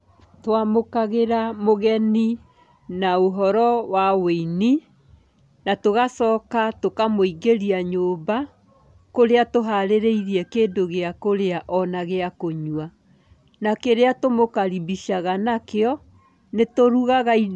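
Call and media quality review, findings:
No faults found in the speech signal; level, timing and continuity hold steady throughout, with nothing to attribute to the capture, transport or playback chain.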